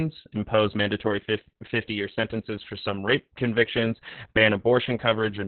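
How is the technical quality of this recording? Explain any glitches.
Poor: heavy Opus voice compression runs throughout the speech. Squeezed to narrowband SILK coding at what sounds like a very low bitrate, the spectrogram shows nothing above 4.2 kHz, and the voice comes out muffled, hoarse and slightly robotic.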